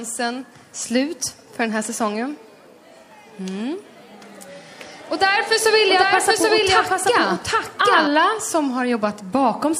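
The audio carries a doubled audio track from 5.65 to 8.07 s: a dry, full-band copy at about equal level trails roughly 0.7 s behind, starting and stopping abruptly, likely from a second capture path or misaligned edit.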